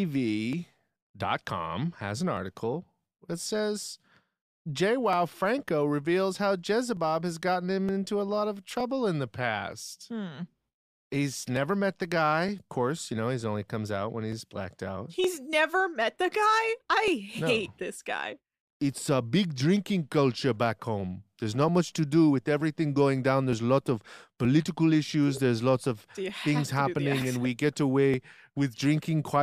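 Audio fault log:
0.53–29.06 s, clock drift buffer slips: a click or pop recurs every 0.92 s through the speech, about thirty in all. This is likely two devices on separate clocks disagreeing by several hundred parts per million, so the buffer between them drifts until a short block of a few dozen samples is dropped or repeated. Each slip is a waveform discontinuity and a thin broadband vertical line on a spectrogram, at evenly spaced intervals.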